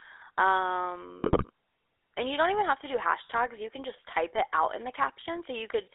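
Throughout, the speech has a buzzy, gravelly roughness and a thin, boxed-in tone, with nothing below about 300 Hz or above about 3.6 kHz. This is GSM full-rate codec damage, plainly audible. The codec rebuilds the voice from a vocal-tract model excited by sparse regular pulses, which fits the 13 kbps full-rate coder.

From 1.22 to 1.45 s the speech breaks into squawks, pops and a gargling smear. These are GSM bit errors. Corrupted filter, pitch and gain values reached the decoder, warping the spectrum and level of each frame they hit, which points to roughly a dozen damaged frames.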